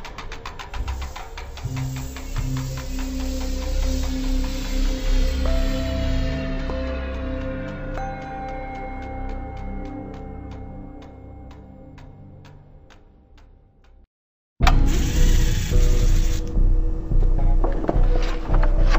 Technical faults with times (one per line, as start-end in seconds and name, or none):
0.00-18.98 stereo read as mono